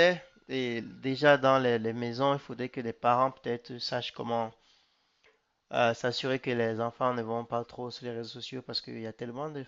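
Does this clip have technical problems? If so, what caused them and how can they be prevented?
No, no audible faults.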